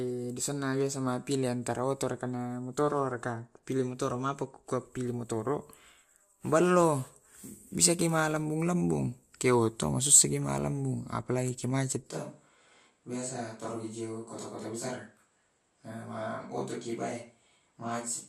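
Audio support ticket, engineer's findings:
Speech turns roomy and hollow at 12.12 s, abrupt, persists to end. Switch to a distant microphone, likely close mic dropped out. Level a few dB down, thinner low end, raised noise floor. Waveform: step down in amplitude. Spectrogram: lows fade, reverb smear and background noise fill the gaps.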